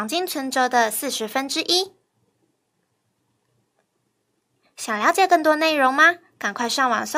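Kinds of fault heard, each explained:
No technical faults can be heard in this recording.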